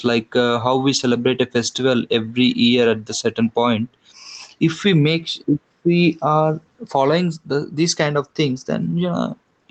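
A speech clip with gain pumping throughout, likely from input gain set far too high for the microphone, so a fast limiter or compressor clamps down on every loud syllable. The gain swings by roughly 5 dB, leaving the speech squashed and flat in level. The call codec's band limit, with nothing above about 8 kHz, is also present.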